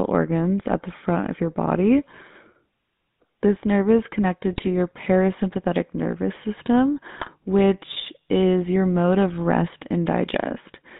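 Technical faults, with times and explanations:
Throughout: GSM full-rate codec. The speech is confined to roughly 150 Hz to 3.7 kHz. A vocal-tract model is driven by thinned, regularly spaced pulses. This gives a plainly audible buzzy, gravelly roughness, consistent with 13 kbps full-rate coding.
4.53–4.69 s and 7.16–7.29 s: GSM bit errors. Two bursts, about 0.16 s and 0.13 s long, break the speech into squawks, pops and gargling. Corrupted filter, pitch or gain values distort the spectrum or spike the level for several consecutive frames.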